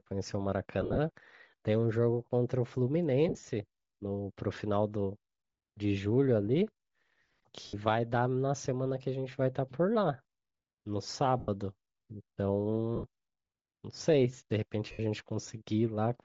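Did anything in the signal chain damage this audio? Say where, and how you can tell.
Yes. Throughout, the speech has a breathy, grainy edge with noise-like hiss in the upper band instead of real detail. That is likely Bluetooth LC3 compression at the codec stage: at a low rate, around 32 kbps with 7.5 ms frames, LC3 zeroes upper spectrum and fills it with noise.

At the radio link, lost LE Audio frames smear the speech into short noisy bursts at 0.81–0.98 s, 3.29–3.47 s, 7.67–7.75 s, 11.39–11.48 s, 12.96–13.04 s and 14.92–15.00 s. The decoder conceals each gap by reusing the last spectrum with randomised signs.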